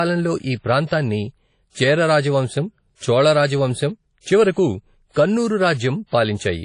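WMA compression runs through the whole speech clip: a ringing, washy smear with hiss that breathes with the sound, and nothing above about 10.1 kHz, which fits a likely low-bitrate WMA encode near 32 kbps, where long transform blocks spread quantisation noise and zero weak spectral lines.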